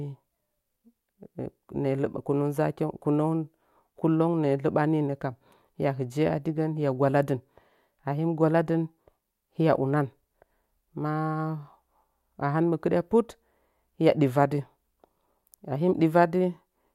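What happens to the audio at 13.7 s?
Nothing goes wrong at 13.7 s: the speech carries on intact through that moment, with no dropout, click, distortion or other fault.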